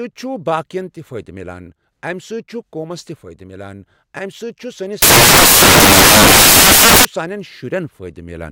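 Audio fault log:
5.02–7.05 s, samples built from the wrong bytes: right after "چھُ سٲنِس" the speech is buried under loud, harsh broadband noise for about two seconds. Each sample's bytes are assembled in the wrong order or alignment, so the rapidly changing low bits become the dominant part of every value.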